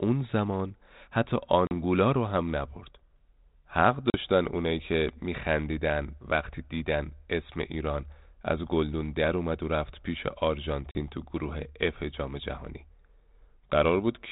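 Speech over a G.726 ADPCM call with packet loss: about four packets (40 ms) vanish at 1.67, 4.1 and 10.91 s, leaving hard-edged silent gaps before audio resumes briefly slightly distorted.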